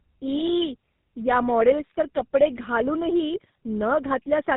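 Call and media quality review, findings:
Tandem speech coding, throughout: speech re-encoded across two low-rate codecs in a row, consistent with G.729A then GSM full rate with a G.711 link between. Second coder compounds the first's errors. Rough, muffled, warbly speech; nothing above 3.8 kHz.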